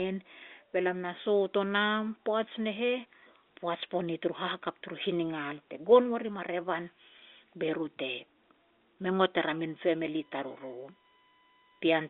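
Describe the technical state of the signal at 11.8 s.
USB whine is present at 11.8 s, running from 9.66 s, just after "er a", to the end. Current drawn in 1 ms USB frames leaks through power or ground, leaving a steady 1 kHz tone roughly 35 dB below the telephone-band speech.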